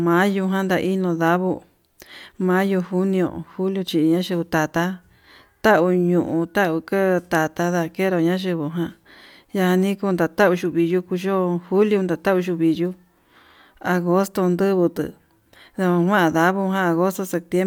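No technical faults can be heard anywhere in the recording; the signal stays continuous and steady throughout.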